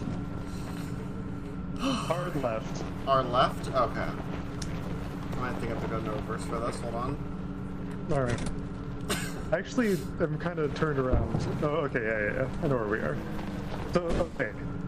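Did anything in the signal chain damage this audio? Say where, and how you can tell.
No, nothing in the signal chain stood out as a problem when I listened to this audio.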